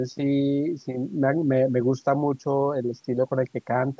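Nothing technically wrong turns up in this bit of speech, which just carries the usual mark of a call's microphone processing, with the lowest bass trimmed away and nothing above about 8 kHz.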